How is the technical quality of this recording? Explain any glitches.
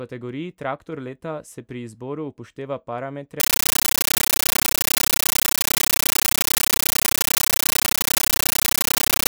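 The recording breaks down badly partway through. The speech runs clean only until 3.4 s. From there to the end it is replaced by a compressed stream played as audio. An undecoded Dolby Digital (AC-3) bitstream, consistent with a 640 kbps encode, is being treated as ordinary PCM samples. Each coded frame comes through as a 13.3 ms burst of loud noise followed by silent padding, repeating 31.25 times a second. The result is very loud, harsh chattering static. On a waveform this shows as evenly spaced, clipped-looking blocks separated by flat gaps. On a spectrogram it appears as broadband noise filling the whole frequency range, striped vertically at a steady rhythm.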